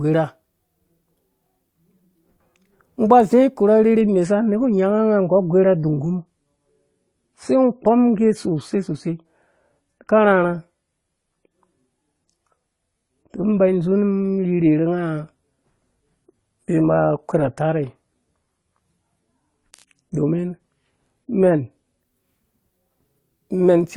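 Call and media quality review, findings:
Adaptive stream at a lower bitrate, 4.01–22.01 s. Speech turns abruptly duller, with nothing above 11.5 kHz and added codec artefacts, and no gap at either switch. The player fell back to a lower-bitrate rendition, consistent with AAC at about 32 instead of 96 kbit/s.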